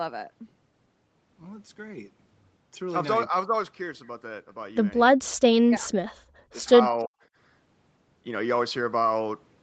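From 5.62 to 6.01 s, 6.52 to 6.69 s and 6.92 to 7.15 s, the speech dips sharply, up to about 40 dB. This is likely speech suppressed in double talk.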